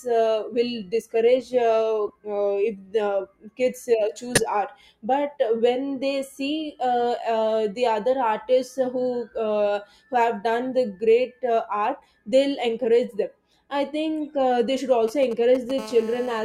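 At 1.08 s, just after "uh will", a corrupt frame was decoded. Damaged bits in a few compressed frames were played anyway. Misread values put energy at the wrong frequencies for about 40 ms. It is faint. It recurs at 2.07 to 2.10 s, louder and shorter. At 4.35 to 4.44 s it is strongest. Two frames break into a loud glitch, peaking around -5 dBFS.

From 15.08 to 15.80 s come GSM signalling bursts. A nearby 2G phone is exchanging short radio bursts with the network, as before a call connects. The audio circuit rectifies them. The result is a galloping dit-dit-dit of brief 217 Hz buzzes. They sit roughly 15 dB below the speech.

At 15.80 s this becomes steady GSM phone buzz, running to 16.40 s. The phone is now transmitting continuously at 217 bursts per second. Each rectified pulse adds to a hard, raspy 217 Hz tone with many harmonics. It has no relation to the speech. It sits about 17 dB below it.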